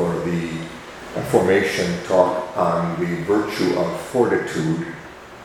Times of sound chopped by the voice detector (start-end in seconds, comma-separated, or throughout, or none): none